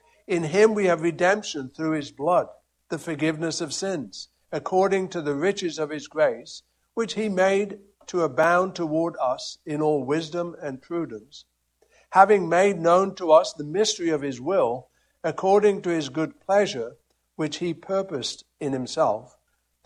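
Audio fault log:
8.43 s, block of digital silence. The sound drops to silence for about 1.8 ms and then returns. There is no fade on either side. The waveform jumps straight to silence and straight back, so each edge makes a sharp discontinuity. The gap is too short to hear as a hole, so the two edges merge into a single tick. A dropout like this points to an output buffer that was not filled in time.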